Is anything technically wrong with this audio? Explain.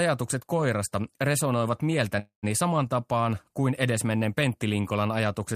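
Yes, there's a call audio freeze in this speech from 2.19 to 2.45 s, right after "koirasta resonoivat". Packets were likely held up so the jitter buffer ran dry; the last sound smears into a fading buzz or hiss, then about 120 ms of silence. Speech resumes at "saman tapaan kuin edesmenneen" roughly 0.23 s late, with nothing lost.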